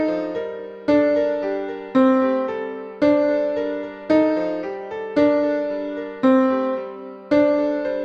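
No technical faults occur anywhere in the clip, so there is nothing to place in time order.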